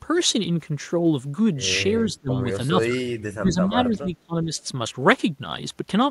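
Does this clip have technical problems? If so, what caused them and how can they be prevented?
Yes. The speech drops sharply in level three times: from 2.07 to 2.47 s, by roughly 25 dB; from 2.71 to 3.04 s, by about 15 dB; and from 3.34 to 4.53 s, again by roughly 25 dB, with about a second of the signal affected. This is likely speech suppressed in double talk, where the echo canceller mistook near-end speech for loudspeaker echo during overlap and attenuated it. Better double-talk detection and a less aggressive residual echo suppressor would prevent it.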